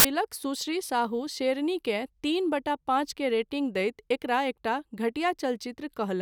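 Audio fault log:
0.00–0.05 s, file tags played as audio: an embedded cover picture gets read as samples, so its compressed bytes blast out as a hard-edged burst of very loud white noise.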